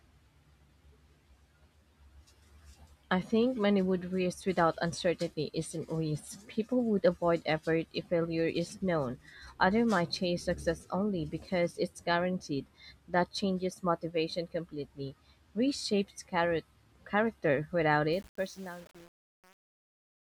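A speech clip whose fade-out, from about 18.13 s to the end at 20.27 s, turns gritty and grainy instead of thinning away cleanly. This is truncation distortion on a fade: the gain stage appears to keep only around 7 bits with no dither. The waveform collapses into a few coarse square steps as the level sinks.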